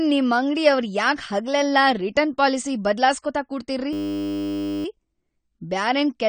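A low-bitrate lossy encoder, likely AAC compression, has coded the whole speech recording, discarding everything above 9 kHz and coarsely quantising what remains. The voice sounds dull and smeared, with plainly audible warbling and a fizzy edge on sibilants, which points to a low bitrate.

From 3.93 to 4.85 s a system hang loop occurs: the computer stalled while the audio hardware kept replaying the same 10 ms stretch of its buffer. Repeating that tiny slice at 100 Hz replaces the speech with a steady, pitched buzz for nearly a second.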